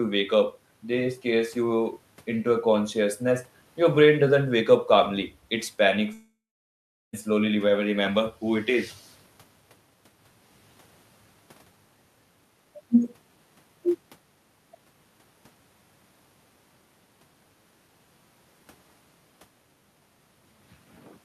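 A speech recording with one long network dropout between 6.13 s and 7.15 s. The sound just before the gap doesn't stop cleanly; it stretches into a buzzy, fading tail, then about 0.77 s of near silence follows before speech resumes with roughly a second of material missing. The likely cause is an interrupted stream that the receiver tried to paper over. A brief packet loss would be smoothed almost invisibly; here the concealment runs out and leaves an audible hole.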